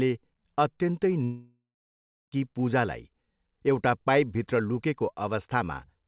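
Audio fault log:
1.24–2.34 s, long network dropout: the last sound smears into a fading buzz, then about 0.7 s of silence before audio resumes with about 1.08 s lost, likely an outage. Unlike a brief packet-loss blip, concealment runs out and leaves real silence.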